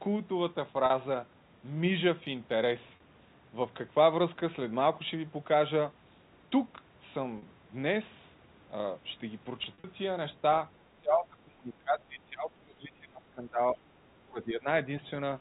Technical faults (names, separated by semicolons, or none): packet loss with pitch repetition; speech suppressed in double talk